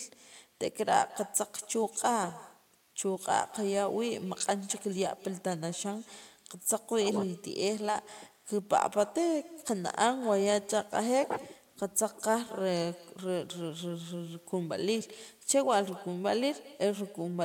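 Speech runs through the whole clip shadowed by its own echo with no canceller: a discrete, thinner copy of every phrase arrives around a fifth of a second later, sitting about 21 dB below the direct sound. The far end is playing the call on a loudspeaker that its microphone picks up, and nothing strips that path out. Room reverberation would smear into a continuous decay; this is a distinct repeat after a clear gap.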